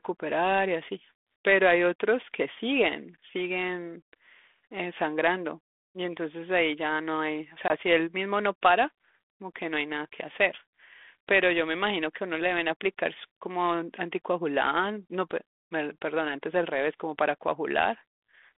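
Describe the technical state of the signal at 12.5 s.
At 12.5 s the signal is intact, with no fault present beyond the light, band-limited character of the 32 kbit/s G.726 ADPCM telephone path carrying the speech.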